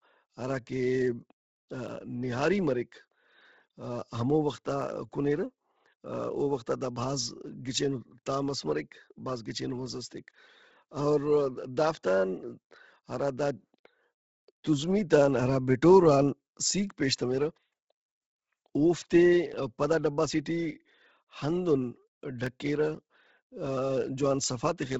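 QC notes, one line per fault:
throughout, Bluetooth LC3 compression: likely a low-bitrate LC3 stream, fitting about 16 kbps, cuts everything above 7.8 kHz and noise-fills the top, leaving speech breathy and grainy.
1.89 to 22.47 s, clock drift buffer slips: two clocks likely disagree by around 100 ppm, so every 2.94 s a small block of samples slips, giving about seven regular clicks.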